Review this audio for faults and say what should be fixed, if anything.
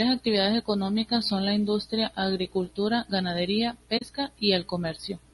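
Throughout the speech the voice sounds rough and grainy, with a hiss-like fill between the harmonics and an artificial, thinned top band. This is plainly audible coding damage, most likely low-delay AAC compression (AAC-ELD) at 32 kbps. Its short frames resolve pitch harmonics poorly, so bits run out and noise leaks into the gaps. Raising the bitrate or using a longer-frame codec where latency allows would prevent it.

From 3.97 to 4.02 s, just after "la industria agricultura ganadería", the speech fades briefly into silence and back. This is AAC frame loss with muting. The decoder zeroed the missing spectrum, and the overlapping windows soften the edges of the hole. The gap of about 40 ms fits two lost frames. A dropout or sample glitch would cut hard and click, while packet-loss concealment would fill the gap with smeared sound rather than silence. Better network jitter buffering or forward error correction would prevent it.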